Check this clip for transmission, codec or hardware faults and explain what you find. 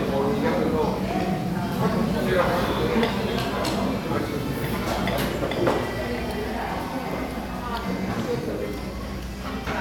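No faults detected here.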